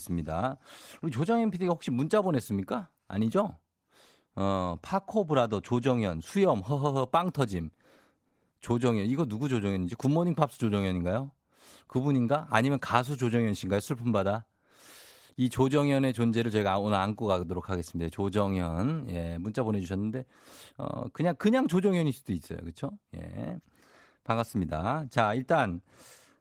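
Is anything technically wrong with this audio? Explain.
No, nothing is technically wrong with this audio.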